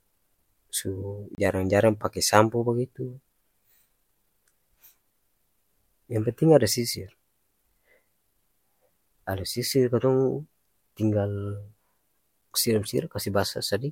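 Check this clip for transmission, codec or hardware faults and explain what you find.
One fault. From 1.35 to 1.38 s, a block of digital silence: a 30 ms run of zeros drops the speech abruptly, leaving a short hole.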